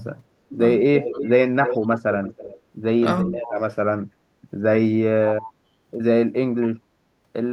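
A speech recording with two faults from a call path. First, an echo leak. A delayed copy of the speech returns at 0.98–1.30 s, 1.64–2.01 s, 2.23–2.60 s and 3.21–3.41 s. Each copy trails the original by about 328 ms. It sits roughly 5 to 20 dB below the speech. It is loudest near 1.64 s and faintest near 2.23 s. The likely cause is a far-end loudspeaker whose echo canceller let part of the pickup through. Second, speech suppressed in double talk. The speech dips at 1.80–1.86 s, 3.30–3.54 s, 5.41–5.70 s and 6.50–6.70 s. The first dip is shallow and brief. Later ones grow deeper and mostly longer, reaching about 25 dB at 6.50 s. The likely cause is an echo canceller that could not tell the talker from echo while both sides spoke, so it turned everything down.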